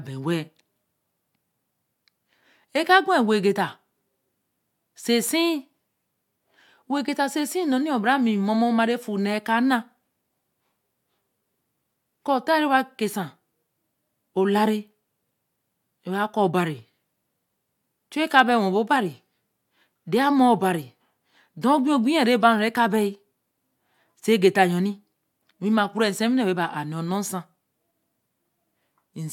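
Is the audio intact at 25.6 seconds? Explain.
Yes, at 25.6 seconds the speech runs cleanly, with no dropout, click, distortion or other technical fault at that moment.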